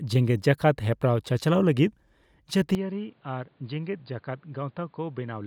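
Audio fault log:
2.75 to 5.46 s, input switched to a poorer device: the recording likely moved to a different, lower-grade input with no gap at the switch. Nothing above 4.9 kHz survives, so the speech turns dull and boxy, drops about 10 dB, and picks up a faint new background noise.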